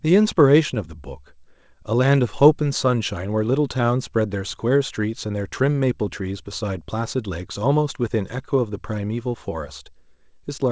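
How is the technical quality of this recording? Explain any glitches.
The recording has a steady timing problem running through almost the whole speech clip, with the audio limited to nothing above 8 kHz, which fits a wideband call codec such as G.722.

Clock drift between sender and receiver, throughout: the sender's clock runs roughly 2 percent slower than the receiver's, so the jitter buffer keeps draining faster than it refills. The receiver has to compensate continuously, and the result is small recurring hiccups at uneven intervals rather than one obvious break.

Repeated timing corrections, from 0.42 s to 10.39 s: to stay in step, the receiver keeps repeating short pieces, stretching the stream to 98 percent speed and adding about a fifth of a second in total. The edits are all in the same direction but unevenly spaced, heard as faint stutters and a slightly unsteady tempo.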